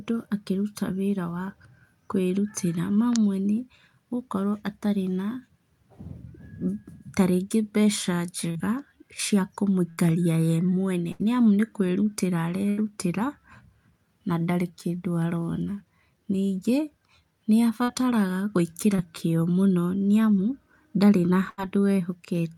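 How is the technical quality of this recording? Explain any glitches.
The speech is marred by network dropouts, seven in all, of two kinds.

Short concealed packet loss occurs at 8.51, 17.83 and 18.96 s. Roughly 20 to 40 ms of audio failed to arrive, and the decoder extended the preceding sound across the hole before blending back in. Each one is a brief smear or wobble rather than an audible gap.

Bursts of packet loss occur at 9.90, 11.12, 12.70 (right after "nĩ kwĩrutĩra") and 21.50 s. About 80 ms went missing each time, and the concealment held the last sound while fading it. Unlike the short losses, these give a sustained buzz or dying hiss, and speech resumes with a slice gone.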